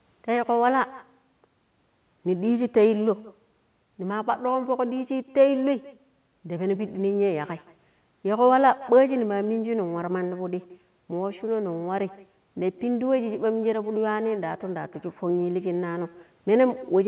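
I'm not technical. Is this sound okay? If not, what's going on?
No. An echo with no canceller runs through the whole recording: the far end's loudspeaker leaks into its microphone, and nothing removes it. So everything the talker says returns about a sixth of a second later as a faint, hollow repeat.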